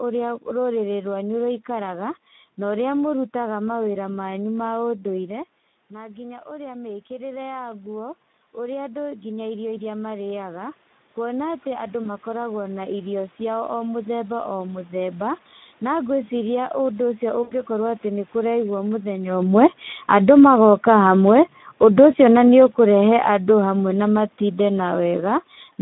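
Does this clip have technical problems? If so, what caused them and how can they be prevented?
Yes. Speex codec damage runs through the whole clip. The encoder has too few bits for the excitation signal, so the sound comes out hoarse and noisy. That degree of damage fits a low setting of around 11 kbps, and the band stays within about 200 Hz to 3.7 kHz. To prevent it, use a higher Speex quality setting or a modern wideband codec such as Opus.

Automatic gain rising runs from 4.87 to 15.27 s. Near 5 s the talker seems to move away and the input drops by about 14 dB. The gain control then slowly adds about 15 dB, so voice and room noise swell together over several seconds. To prevent it, keep a steady distance from the microphone or use a slower, range-limited gain control.

VoIP packet loss concealed by the speech codec occurs at 12.03–12.08 s and 17.43–17.55 s. The decoder fills about 20 ms and then about 80 ms by extending its last pitch and filter. 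This produces a fading buzzy tone or coloured noise that leaves the next sounds weak or distorted. To prevent it, use a more reliable network path, forward error correction or a larger jitter buffer.

Automatic gain falling occurs at 19.32–20.46 s, by about 5 dB, and again at 21.14–25.16 s, by about 6 dB. Around 19 s the talker moves, and the gain control pulls the level down. The voice and background sink together. To prevent it, hold a consistent mic position or slow the gain control's attack.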